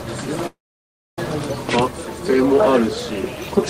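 At 0.46 s the sound stops moving forward and turns into a brief fading buzz, then about 0.63 s of silence, before resuming at 1.19 s exactly where it left off. That is a call audio freeze, likely from packets held up in transit until the jitter buffer ran dry. Unlike a dropout, nothing is lost: roughly 0.71 s of filler is inserted, so everything afterwards simply arrives that much later.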